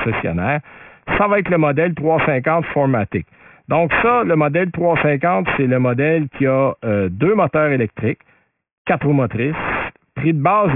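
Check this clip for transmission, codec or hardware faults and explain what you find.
The speech carries one fault, aliasing, running through the whole clip. The sound points to a drop from 48 kHz to about 6 kHz with no anti-alias filter, so everything above 3 kHz folds back below it. Those mirrored components sit only about 10 dB under the speech, making sibilants gritty and metallic, with energy jammed hard against the 3 kHz edge.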